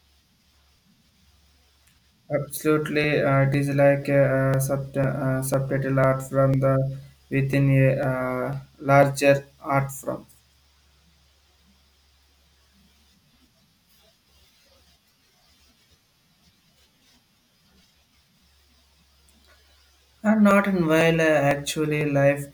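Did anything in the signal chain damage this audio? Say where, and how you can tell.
Yes. The driver or buffer stage shows periodic USB or driver dropouts: something stalls the audio path every 0.5 s from 0.55 s to 22.01 s, skipping around a millisecond each time. The roughly forty gaps splice the speech together abruptly, producing evenly spaced ticks.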